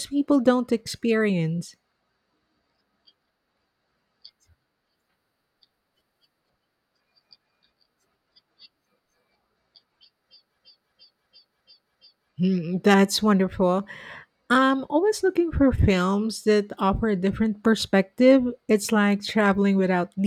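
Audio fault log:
10.58–12.29 s system hang loop: a 341 ms slice repeats five times, a 2.93 Hz stutter as a frozen system's ring buffer replays; about 1.5 s lost.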